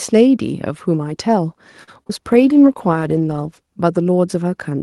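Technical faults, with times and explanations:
1.83–1.90 s, short stall from a late packet: A packet arrived late, the jitter buffer ran dry, and the receiver held the last sound for about 41 ms until the packet came, then resumed from the same point. Nothing is lost, but playback now runs about 41 ms later than before. That one held moment sounds stretched, with a faint buzz or dip where the repeated material sits in place of fresh audio.
2.04–2.08 s and 2.08–2.11 s, short concealed packet loss: Two consecutive 20 ms chunks of the speech never reached the decoder in time. The receiver filled each gap by extending the preceding sound, about 22 ms of synthetic fill for the first and 16 ms for the second, then blended back into the real signal. Coming back to back, they make a brief smeared wobble just after the stall, and any short consonant there may drop out.
2.32–3.67 s, call bitrate drop: The call's bandwidth estimate fell, and the encoder was told to cut its rate from 32 kbps to 14 kbps. 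It stayed at that lowest rate for about 1.28 s before recovering. With less than half the bits, the speech is coded much more coarsely across this stretch, so it turns rougher and more watery, then regains its detail once the rate climbs back.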